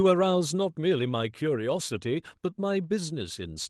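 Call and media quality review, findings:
Lost packet rebuilt from error correction, 2.83–2.85 s: one 20 ms Opus packet dropped, replaced by the next packet's low-bitrate copy. No gap, but that frame sounds briefly rougher and noisier.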